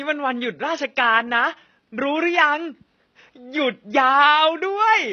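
Throughout this speech clip the top end sounds bright but artificial: sibilants come out gritty and metallic, with a lispy smear, and the treble doesn't quite lock onto the lower harmonics. The damage is plainly audible from start to finish. The likely cause is HE-AAC compression at a very low bitrate, around 16 kbps, which codes only the lower spectrum and fakes the highs by copying lower bands upward under a coarse envelope. The faint room noise, about 52 dB below the speech, sits underneath.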